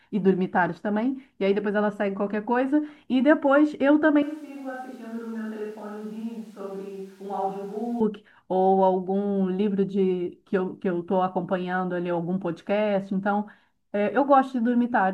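A speech recording where, from 4.23 to 8.00 s, the sound abruptly turns roomy and hollow, thinner in bass, about 10 dB quieter, with room noise near 30 dB below it, likely a switch to a distant microphone. Unlike a simple gain drop or filter, the added reverberation and noise reveal it.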